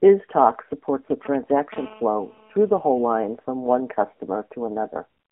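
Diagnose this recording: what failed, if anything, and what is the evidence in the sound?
Codec stage: AMR narrowband mobile codec throughout. Speech is confined to 200 Hz to 3.5 kHz and sounds buzzy and synthetic, which fits about 7.4 kbps.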